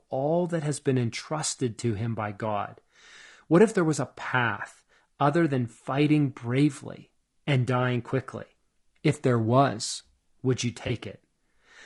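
Throughout, the speech sounds rough and grainy, with noise filling the gaps between harmonics; a spectrogram shows smeared harmonic lines and a thin upper band, likely low-delay AAC compression at around 32 kbps. From 10.87 to 10.90 s, just after "there was would you", AAC frame loss with concealment leaves a brief smeared, noisy patch, shown on a spectrogram as a blurred vertical strip with broken harmonics.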